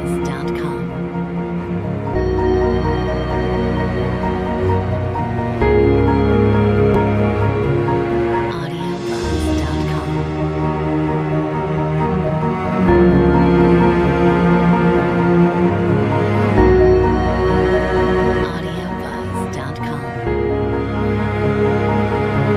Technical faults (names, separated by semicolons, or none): damaged data in a compressed stream